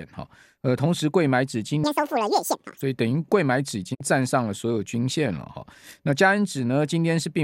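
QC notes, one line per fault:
1.84 to 2.81 s, section at the wrong speed: runs double speed, hurried and about ten semitones higher, likely from being clocked at the wrong rate during playback or editing.
3.93 to 4.02 s, digital broadcast dropout: audio fades out over 20 ms and leaves a 48 ms hole, which fits a couple of frames failing and the receiver muting.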